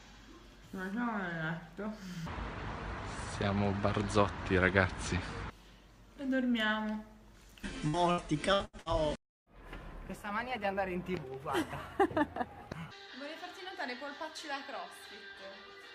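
From 7.75 to 8.89 s there is repeated packet loss, heard as robotic sound: six short holes, the longest about 81 ms, each patched by stretching the preceding sound, so roughly 28% of that stretch is synthetic fill. Unlike a single dropout, the gaps recur in quick succession, and the repeated patching gives a choppy texture rather than clean silences.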